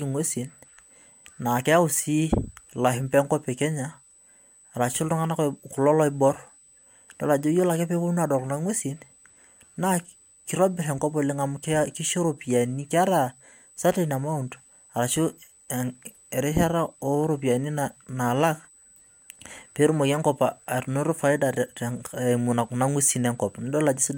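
A speech recording carries USB whine from start to finish: a steady, fixed-pitch tone at 8 kHz, sitting roughly 30 dB below the speech. The 8 kHz pitch matches the 125-microsecond microframe rate of a USB bus, whose pulsed current draw leaks into the audio path through shared power or ground. On a spectrogram it appears as a thin, unbroken horizontal line at 8 kHz running the full width of the clip.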